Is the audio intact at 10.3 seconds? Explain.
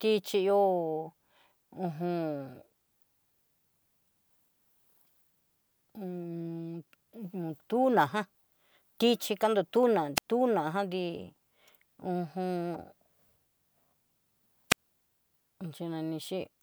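No, not quite. Right around there the speech runs into a wireless microphone squelch dropout, spanning about 10.16 to 10.26 s, so 10.3 s catches the signal just coming back. The radio link from the mic faded enough that the receiver's squelch shut the output off, giving a quick lift of hiss, then roughly 84 ms of near silence, before the speech returns, maybe trailing a little noise as it does.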